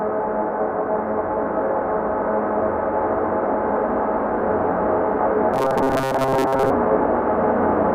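Robotic sound from repeated short buffers runs from 5.54 to 6.70 s in this recording of sounds, where the audio turns into a rigid, metallic buzz pitched at 133 Hz. The likely cause is audio arriving too seldom, so the playback fills the gaps by looping a tiny slice of about 7.5 ms, which fits that 133 Hz tone, for most of the stretch, while the real sound in between is skipped.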